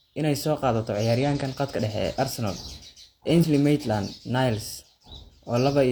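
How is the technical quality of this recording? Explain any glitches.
Two short glitches come from damaged data in a compressed stream, at 1.4 s and from 3.39 to 3.45 s. Corrupted bytes make the decoder misread frames and lose sync until it finds the next valid header, so each spot gives a brief chirp or blip in the speech.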